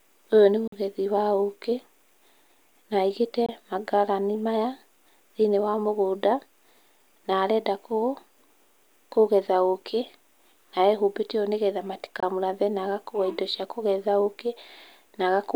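Brief silent holes cut the speech at 0.67 s (about 46 ms, before "wa ũkĩ"), 3.46 s (about 23 ms, between "na aĩgĩte" and "mangarani maya") and 12.20 s (about 23 ms, between "nĩ getha" and "na agakua indo cia"). The speech resumes as if it had kept playing. This is likely a Bluetooth dropout: late audio packets were discarded, and the lengths fit one or two lost packets.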